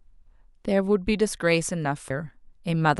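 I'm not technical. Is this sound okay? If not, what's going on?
No. At 2.09 s, one chunk of the stream likely failed to load and the player carried on with the next, a stream segment skipped. You hear the speech suddenly jump ahead with a tiny blip, so a piece of what was said is missing.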